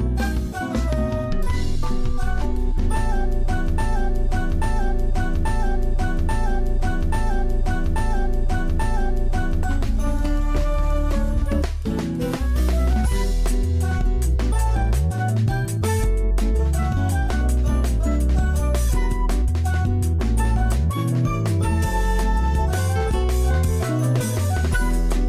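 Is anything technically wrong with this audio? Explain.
Yes. A broken-record loop runs from 3.78 s to 9.63 s. A fragment about 0.84 s long plays seven times back to back, identical each time, so the audio stutters in a fixed cycle instead of moving forward. This is likely a stall in the player, encoder or stream, which kept re-sending the last chunk it held. Whatever audio belonged in those six seconds is missing, and the sound resumes past the gap at 9.63 s.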